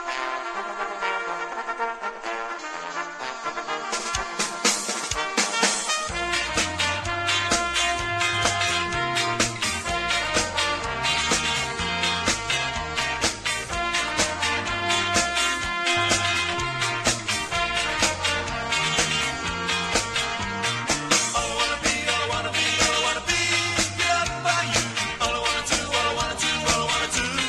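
Nothing in this recording trips, stutters or breaks off at any point, so there's no fault to walk through.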